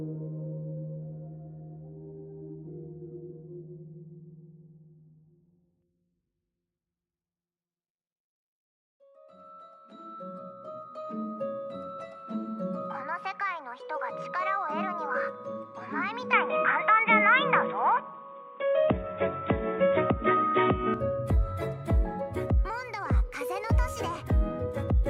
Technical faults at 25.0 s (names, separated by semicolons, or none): none